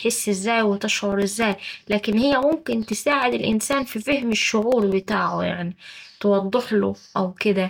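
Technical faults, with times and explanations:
0.92–5.12 s: periodic USB or driver dropouts. Every 0.1 s a tiny slice of the speech, roughly 2 ms, is lost and replaced by silence, as though something stalls the audio path at a fixed rate. The result is a steady ten-per-second ticking riding on the voice, dozens of clicks in all.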